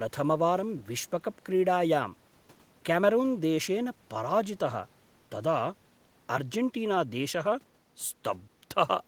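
No technical faults can be heard in this recording.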